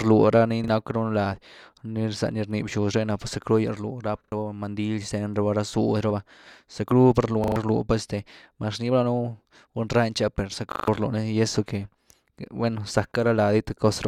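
At 0.64, 4.24, 7.44 and 10.72 s, a repeated buffer stutters the speech. Audio arrived late, so a roughly 40 ms chunk replays two, three, four, then five times (before "mandil xten raba ra", after "ra zudy raba zackru"), skipping up to about 150 ms. The waveform shows identical blocks with hard seams, and the spectrogram shows vertical lines.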